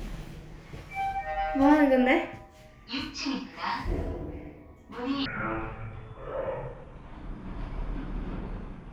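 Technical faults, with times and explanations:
5.26–8.92 s, section at the wrong speed: from 5.26 s to the end, the sound drops to half speed, so everything drags and sinks, about ten semitones lower, with the slower pace and deeper pitch arriving together at the same moment. That lockstep shift is the giveaway. It's likely that this stretch was played back or conformed against the wrong clock, so its samples are read out at half the proper rate, stretching time and lowering pitch in one go.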